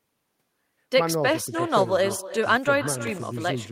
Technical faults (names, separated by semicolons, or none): echo with no canceller; processor overload crackle